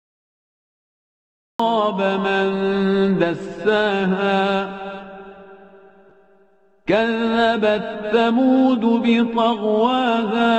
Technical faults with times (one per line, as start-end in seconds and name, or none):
0.00-1.59 cut-off start